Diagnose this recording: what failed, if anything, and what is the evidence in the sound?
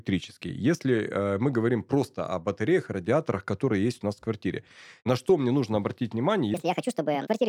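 From 6.54 s to the end at 7.49 s, the speech suddenly runs 1.58 times too fast, and its pitch jumps about seven semitones. That is a section at the wrong speed. The likely cause is an editing or playback stage resampling this segment against the wrong clock.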